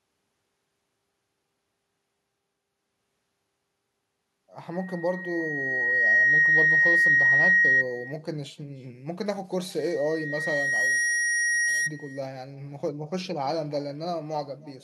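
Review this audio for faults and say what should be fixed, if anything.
The far end plays the call through a loudspeaker with no echo canceller, so its microphone returns the speech throughout, roughly a third of a second late, about 23 dB down and thin. Enabling acoustic echo cancellation at the far end, or switching it to a headset, would remove this.

A loudspeaker feedback squeal occurs because a microphone picks up its own loudspeaker with loop gain above one at 1.9 kHz. The tone swells from 4.73 to 7.84 s to well above the speech, then returns more weakly from 9.79 to 11.91 s. Lowering the loudspeaker gain, separating the microphone from it, or notching 1.9 kHz would prevent it.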